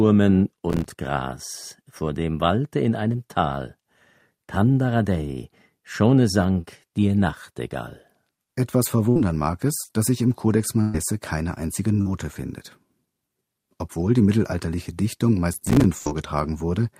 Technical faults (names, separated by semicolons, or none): processor overload crackle; short concealed packet loss; burst of packet loss